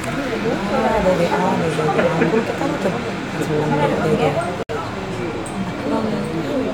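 At 4.63 s a gap at a join of encoded pieces opens and lasts until 4.69 s, about 63 ms of silence cutting into otherwise continuous sound. Two separately encoded segments were butted together without removing the encoder's start-up delay and end-of-stream padding, so that dead air survives at the seam. The edges are smeared by the codec. Unlike a dropout, nothing is lost: the sound resumes exactly where it stopped.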